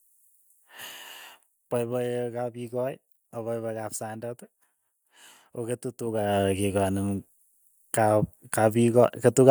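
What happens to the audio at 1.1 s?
Nothing goes wrong at 1.1 s: the speech there is intact, with the level holding steady and no fault to be heard.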